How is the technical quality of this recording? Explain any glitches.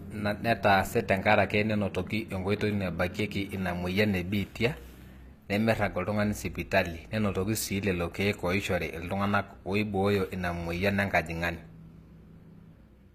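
The technical quality is limited by one fault that runs through the whole recording: plainly audible codec damage, most likely from HE-AAC compression. From start to finish the speech has a synthetic top end. Nothing is present above 14.9 kHz. The codec keeps only the lower spectrum and rebuilds the treble by copying lower bands upward under a coarse envelope. That rebuilt treble is not the original, so its harmonics don't align with those below. The s sounds come out gritty and metallic. The degree of damage fits a low bitrate of around 24 kbps.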